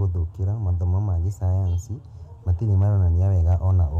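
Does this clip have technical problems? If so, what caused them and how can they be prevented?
Yes. Brief crackle on speech peaks from 2.73 to 2.83 s and 3.27 to 3.71 s is hard clipping: the level exceeded full scale by about 1 dB, flattening peaks. Leaving a few decibels of headroom when setting record gain prevents it.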